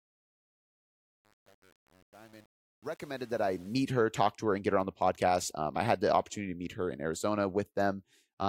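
Truncation distortion on a fade runs from 0.0 to 3.83 s, during the fade-in that ends just before "her talk to her". The gain stage drops low-order bits without dither, which fits an 8-bit stage, so up to 3.68 s the quiet speech turns into gritty steps.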